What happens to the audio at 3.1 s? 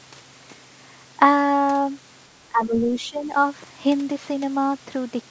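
At 3.1 s the audio sits inside a stretch of speech suppressed in double talk, from 2.49 to 3.34 s. The echo canceller most likely mistook the talker for loudspeaker echo while both sides spoke at once, and attenuated everything it heard. The speech dips by roughly 15 dB at its deepest, with about 0.7 s of that span turned down.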